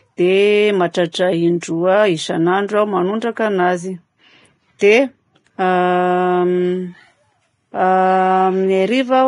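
The whole speech clip has a hissy, grainy texture. Nothing sounds above about 10.6 kHz, so the top octave is gone. Fine treble detail turns to coarse noise rather than clean detail. This is likely Vorbis compression at heavy strain, which fits a bitrate near 27 kbps. At that rate the codec lowers its cut-off. It also quantises the remaining treble so roughly that fine detail becomes noise of similar energy.

Pre-echo appears three times. The first runs from 1.12 to 1.14 s, about 23 ms. The second sits at 1.61 s, about 18 ms. The third runs from 4.79 to 4.81 s, about 22 ms. Each time a short hiss arrives just before a sharp onset. The codec spreads its noise across a whole transform block. Noise sized for the loud attack therefore leaks into the quiet moment ahead of it. The onsets sound softened and smeared.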